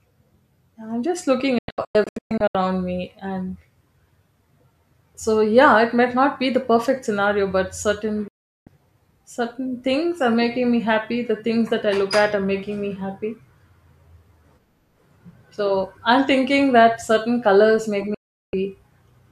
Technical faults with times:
1.58-2.55 digital broadcast dropout
8.28-8.67 digital broadcast dropout
18.14-18.54 digital broadcast dropout

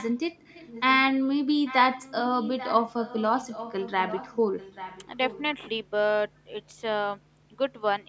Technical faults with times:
0.00-0.16 echo leak
0.54-0.96 echo leak
1.64-5.41 echo leak

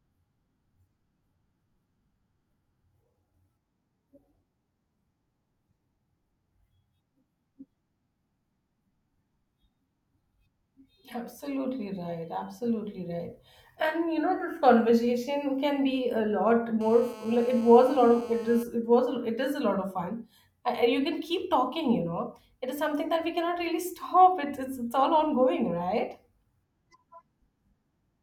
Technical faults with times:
16.81-18.63 GSM phone buzz

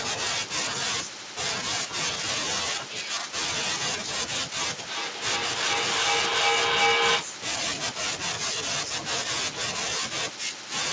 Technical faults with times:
4.87-7.40 feedback echo between two devices

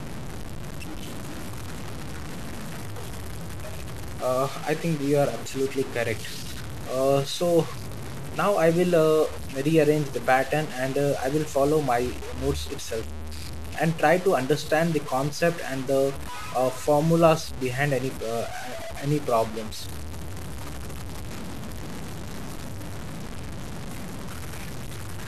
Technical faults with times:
0.00-25.28 low bit depth without dither

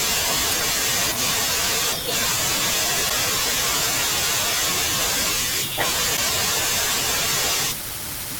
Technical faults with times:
0.49-0.54 damaged data in a compressed stream
3.06-3.11 damaged data in a compressed stream
6.13-6.18 damaged data in a compressed stream

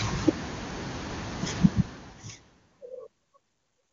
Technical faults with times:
none

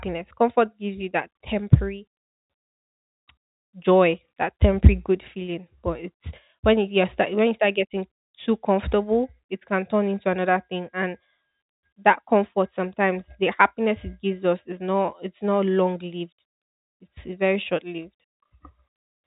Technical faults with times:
none

